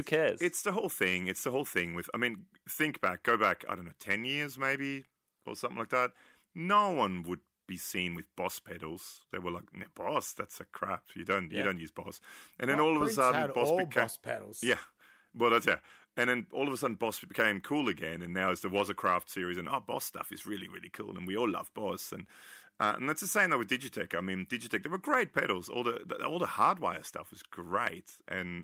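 No technical faults are audible.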